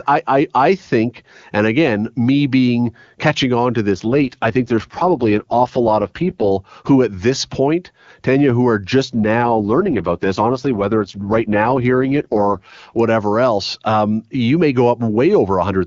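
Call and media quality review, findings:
AMR rate drop, weak radio link forcing the codec down: sound fits a fall from 23.85 to 6.6 kbit/s, at 3.92–6.51 s (after "being catching on to") and 9.05–13.00 s (after "who are"). Speech turns rough and synthetic, with no gaps and no bandwidth loss.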